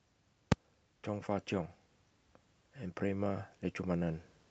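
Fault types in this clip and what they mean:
Invalid numbers at full scale: at 0.52 s a calculation blew up and pinned the output at one extreme value, so you get one sharp bang lasting about 3 ms, which fits a 128-sample block.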